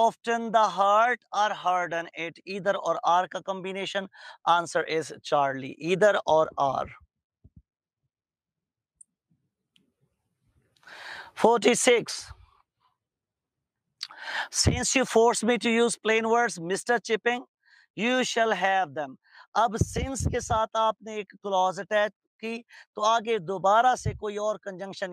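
Nothing in the audio stood out as a technical problem on listening.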